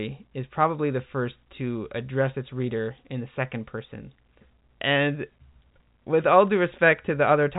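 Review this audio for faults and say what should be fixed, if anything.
Nothing here needs fixing: the speech sits in the usual narrow telephone band of G.711 coding, with nothing above about 3.8 kHz, and that's just how the format sounds, so there's nothing to chase.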